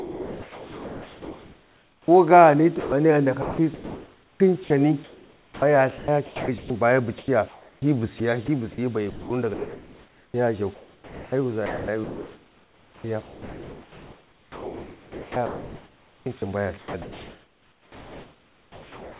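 From 0.00 to 2.08 s the opening of the speech is missing: for about a second the talker should be audible, but the whole stretch is a steady, even hiss. This is sound dropped by the voice detector, likely because the sender judged the quiet start to be background and sent only comfort-noise parameters. What marks it out is a single unbroken replacement, with no flicker. The speech enters cleanly once detection triggers.

From 2.80 s to the end the fault turns into sound chopped by the voice detector. The detector likely keeps switching between sending and pausing, so that about 10.7 s of this stretch is synthetic noise rather than real signal. Soft syllables and word edges vanish, and underneath sits the genuine room noise, about 35 dB below the speech. That repeated switching is what separates it from the single gap at the start. Throughout, nothing is present above 4 kHz, which fits a narrowband G.711 call path.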